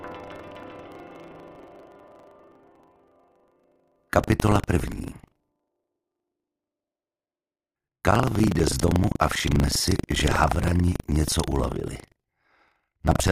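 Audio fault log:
Throughout, buffer tearing: a robotic rattle at 25 Hz, heard only while sound is present. The writer and hardware reader have slipped, so in each period about 15 percent of the buffer replays audio from roughly 70 ms earlier, hard-spliced at both edges.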